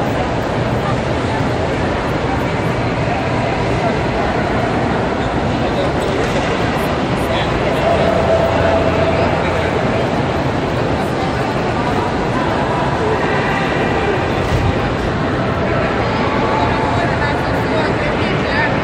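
No technical faults can be heard in this recording of sounds.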